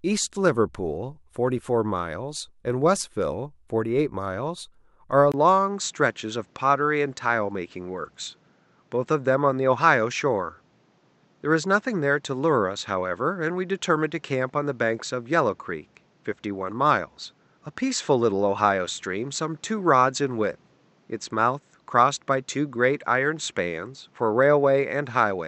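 At 5.32 s a 20 ms gap opens, after which the speech loses everything above 8 kHz and sounds duller, with a faint new background noise well below the voice and no level jump. This most likely reflects the input switching to a poorer device for the rest of the clip.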